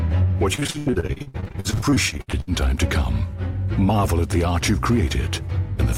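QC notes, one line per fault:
0.55–2.49 s, repeated packet loss (robotic sound): the audio keeps breaking up, around thirty short holes, longest 78 ms, each patched by stretching the last bit of sound. Nearly half that stretch is fill, so it goes choppy.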